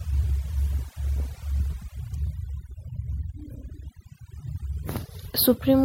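From the start and throughout, the speech shows overdone noise removal. The reducer is set so aggressively that individual frequency bands near its noise estimate are pulled down or cut entirely, taking low-level parts of the speech with them. The background becomes near silence scattered with twinkling artefacts.

At 2.14 s a brief spike sits on top of the audio. This is an electrical switching spike, most likely a brief arc from a nearby switch, motor or static discharge that the audio line picked up.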